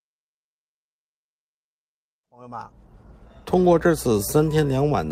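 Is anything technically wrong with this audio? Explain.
No, nothing is technically wrong.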